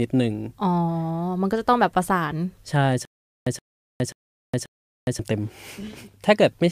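From 3.05 s to 5.19 s the speech breaks into a stutter with silent gaps. A short fragment of about 122 ms plays, then there's roughly 413 ms of dead digital silence, and the same fragment comes back, four times over at a steady 535 ms spacing. That pattern likely comes from the player or stream stalling and replaying its last scrap of audio on each retry before running dry, so whatever should have played across those two seconds is simply gone.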